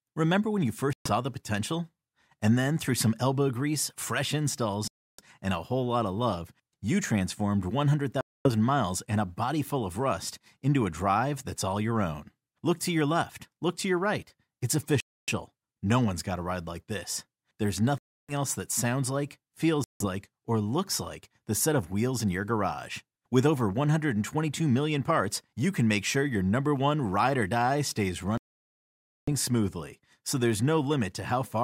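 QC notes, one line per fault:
0.93 to 29.30 s, Bluetooth stall, seven times: 0.93 to 1.10 s (silence 124 ms), 4.88 to 5.21 s (308 ms), 8.21 to 8.49 s (243 ms), 15.00 to 15.29 s (276 ms), 17.98 to 18.33 s (305 ms), 19.84 to 20.05 s (163 ms), and 28.38 to 29.30 s (900 ms). Each time the sound cuts abruptly to silence and then carries on. The likely cause is radio interference delaying packets until the headphone buffer empties and playback waits for retransmissions. A packet-loss concealment glitch would fill the gap with a repeated or smeared fragment. These gaps are true silence.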